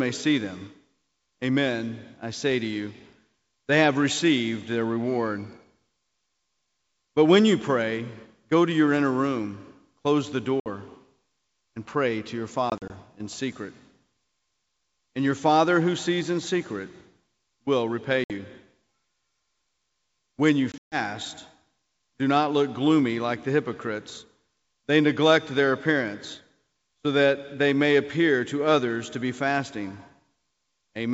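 Four dropouts from packet loss on an ADPCM call hit this speech. At 10.60 s a hard 60 ms silent hole cuts in. From 12.70 to 12.91 s, 80 ms goes missing in scattered gaps, the longest 40 ms. At 18.24 s another 60 ms vanishes, and from 20.72 to 20.96 s there's a 140 ms gap, 160 ms lost in all. Each time the decoder's predictor and step size lose track of the sender's, so the speech comes back slightly distorted. It settles within tens of milliseconds.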